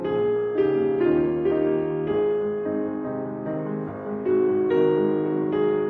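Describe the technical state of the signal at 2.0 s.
At 2.0 s the music plays through intact, with no dropout, distortion, glitch or other fault at that point.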